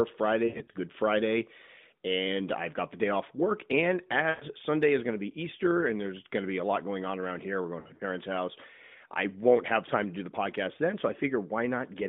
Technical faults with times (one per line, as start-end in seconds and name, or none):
0.48-0.70 lost AMR speech frames
4.30-4.45 lost AMR speech frames
7.80-8.02 lost AMR speech frames